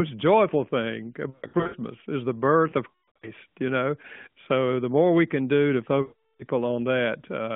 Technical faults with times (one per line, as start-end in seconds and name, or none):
1.30-1.76 lost AMR speech frames
2.90-3.31 lost AMR speech frames
6.02-6.43 lost AMR speech frames